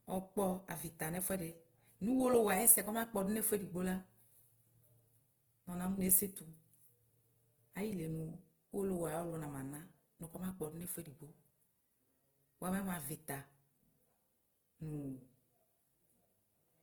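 Throughout the speech, the likely cause is Opus compression at a starved bitrate, consistent with around 16 kbps in its music-oriented CELT mode. With too few bits, the encoder preserves each band's overall energy but fills the fine detail with folded copies of lower bands or noise. The result is plainly audible: speech sounds grainy, rough and noisy rather than swirly. Bandwidth stays fullband, reaching up to about 20.2 kHz.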